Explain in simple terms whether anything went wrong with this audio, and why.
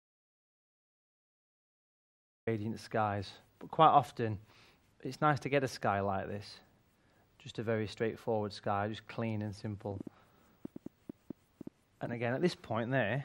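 Two things went wrong. The first is an audio dropout to silence: the clip opens in silence, with no background hiss at all, until the sound suddenly appears at 2.47 s. The input was likely lost and the recorder kept writing silence, so whatever happened before 2.47 s is gone.

The second is a train of clicks from 9.91 s to 12.44 s: around fifteen sharp, similar-sounding ticks at an uneven pace of about five per second, standing out clearly above the sound. Interference from nearby equipment or a faulty connection or power supply could inject pulses like these.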